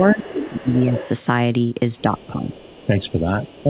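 Speech heard through a narrowband call link, with nothing above 4 kHz as G.711 would give, and two faults. A second voice leaks through from 0.0 to 1.09 s, faintly from 1.98 to 3.11 s and 3.47 to 3.63 s. This is likely the other side's voice leaking past the echo canceller. On a spectrogram it shows as a weaker, separate set of harmonics under the talker's, strongest early at about 10 dB down. Speech is also suppressed during double talk from 0.14 to 1.07 s, 2.02 to 2.49 s and 2.86 to 3.7 s. The talker's level dips by roughly 10 to 15 dB, which shows as notches in the waveform envelope while both voices overlap.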